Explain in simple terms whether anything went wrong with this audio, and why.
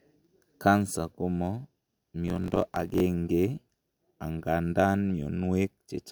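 From 2.26 to 3.02 s, a block size mismatch (truncated) cuts off each block's end, causing a 50 Hz buzz and speech running 1.07 times faster with its timbre intact, unlike a simple speed-up.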